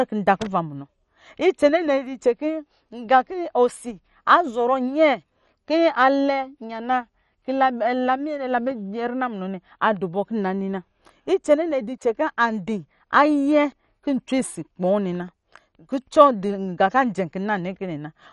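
Throughout the speech the top end stops dead at about 11.3 kHz, and what remains sounds dull, with a gurgling, granular roughness. This is likely MP2 compression, starved of bits, consistent with a rate near 48 kbps, switching off upper sub-bands and coarsely quantising the rest.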